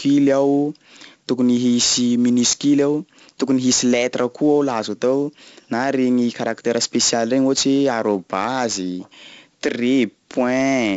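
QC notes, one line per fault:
Throughout: 4-bit ADPCM compression. Every loud stretch of speech carries a heavy gritty hiss that rises and falls with the level. Each sample is coded as a coarse step from a prediction, so the error tracks the signal. Nothing sounds above 7.7 kHz, which fits roughly 64 kbps at a 16 kHz rate.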